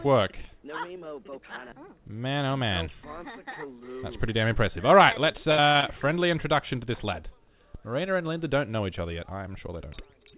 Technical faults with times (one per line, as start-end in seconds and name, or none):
5.32-5.84 repeated packet loss (robotic sound)